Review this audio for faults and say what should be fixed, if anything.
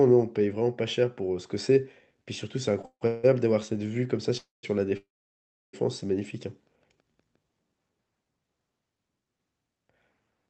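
A short stall from a late packet comes first, at 2.81 to 2.85 s, just ahead of the freezes. For about 21 ms the receiver holds the last sound instead of playing new audio, because the jitter buffer ran dry when a packet came due. When the packet arrives, playback resumes from the same point, so nothing is lost. Unlike a freeze, it is too brief to fade or fall silent. It is heard only as a slightly held, buzzy syllable. A deeper jitter buffer, or a fix for the network delay spikes, would prevent it.

Call audio freezes follow at 2.85 to 3.03 s, 3.07 to 3.25 s, 4.37 to 4.65 s and 4.97 to 5.75 s. They last 155, 164, 257 and 762 ms. In each one the last sound continues as a decaying buzz. In three of them it then drops to silence, for 80, 170 and 690 ms. Afterwards the audio resumes where it stopped, so gaps are inserted but nothing is cut. The likely cause is packets held up in transit. What sets these apart from the short stall is their length and the fade into silence. 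Cutting network congestion, or giving the jitter buffer more headroom, would prevent them.

A jitter buffer slow-down runs from 6.96 to 7.14 s. There the receiver repeats single pitch periods to rebuild its reserve. This adds 42 ms and plays that stretch at about 81% speed with the pitch unchanged, so sounds are drawn out. Unlike a freeze, the audio never stops or buzzes. It only lags and stretches. Steadier packet timing, so the buffer rarely runs low, would prevent it.

The Opus call path limits the audio to 8 kHz and runs at 64 kbps.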